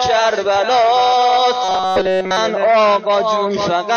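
From about 1.64 to 2.37 s the sound collapses into robotic sound from repeated short buffers, a rigid metallic buzz at 188 Hz covering essentially the whole stretch. That pitch fits a slice of roughly 5 ms being looped, likely because fresh audio stopped arriving in time.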